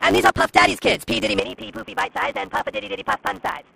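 A steady 100 Hz buzz runs through the whole clip, and the sound plays about 1.16 times too fast while keeping its timbre. This is a block size mismatch (truncated): one stage writes longer blocks than the next reads, consistent with 512-sample writes, so each block's tail is dropped. From 1.39 s to the end, the sound turns dull and boxy with no break. It also drops about 5 dB in level, and a new noise floor sits roughly 30 dB below it, likely because the input switched to a poorer device.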